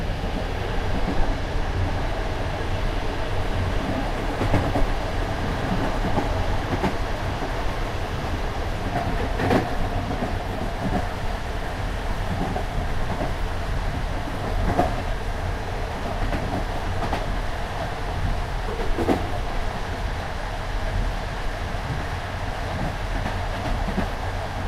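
No technical faults are audible anywhere in this recording.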